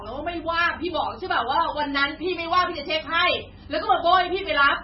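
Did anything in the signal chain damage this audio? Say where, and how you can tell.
Yes. Throughout the speech the codec stage has done heavy damage, most likely MP3 compression at a very low bitrate, which fits something around 16 kbps. There is nothing above 5.6 kHz, so sibilants lose their edge, and the remaining detail has a watery, swirling quality as weak frequency lines flicker in and out between frames. On a spectrogram this appears as a hard flat ceiling at 5.6 kHz with patchy, blocky gaps below it; the waveform shows smeared consonant attacks.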